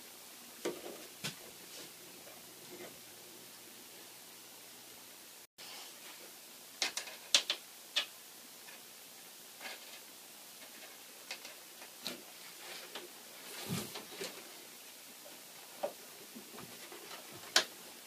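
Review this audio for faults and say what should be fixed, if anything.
Repeated buffer at 1.42 s and again from 14.07 to 14.10 s. The playback device ran out of fresh audio and replayed its last block of about 5.8 ms, which fits a 256-sample buffer. At 1.42 s that block plays once more, heard as a single click. At 14.07 s it repeats four extra times, making a short buzz, and a couple of hundredths of a second of real audio are skipped. A larger output buffer or higher-priority audio thread would stop the device from starving.

Digital broadcast dropout from 5.45 to 5.59 s. The receiver lost valid frames and muted for about 128 ms, which fits roughly four frames going missing. The sound fades out over about 3 ms, leaves a clean hole, and resumes further along, so whatever was transmitted in that gap is gone rather than delayed. Better reception or stronger error protection on the broadcast link would keep frames from failing and triggering the mute.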